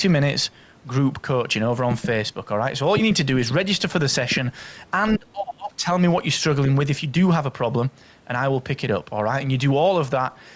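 Speech suppressed in double talk, from 5.17 to 5.87 s: the speech sinks by as much as about 30 dB for that stretch. The likely cause is an echo canceller that mistook this talker for loudspeaker echo while both sides spoke, and turned it down.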